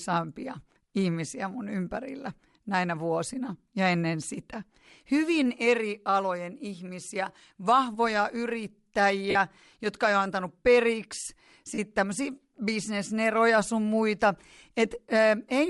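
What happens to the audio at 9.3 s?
From 9.30 to 9.35 s, about 45 ms of audio is missing as lost LE Audio frames, a gap that fits six consecutive 7.5 ms frames. The LC3 decoder fills it by reusing the last spectrum with randomised signs and fading it over the later frames, so the speech briefly becomes a noisy smear that thins out before normal sound resumes. Across this span the speech also carries plainly audible Bluetooth LC3 compression, likely from encoding at around 48 kbps with 7.5 ms frames. Parts of the upper spectrum are zeroed and refilled with noise, which gives the voice a breathy, grainy edge.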